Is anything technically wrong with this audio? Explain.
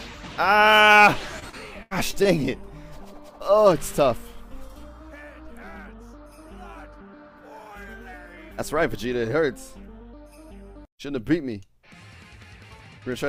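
Yes. From 1.39 to 2.27 s, repeated packet loss: several successive holes, the longest 81 ms, were patched by stretching the preceding sound, leaving choppy, robotic audio with pieces missing.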